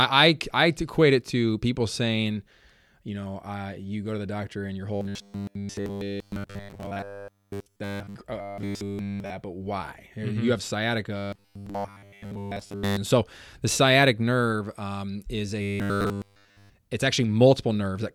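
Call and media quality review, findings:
Rigid metallic 100 Hz buzz over the speech at 4.95–8.15 s, 8.41–9.30 s, 11.18–12.98 s, 15.62–16.70 s; robotic sound from repeated short buffers, likely jitter-buffer underrun looping 10 ms chunks, replacing most real audio, nearly all in the second and fourth.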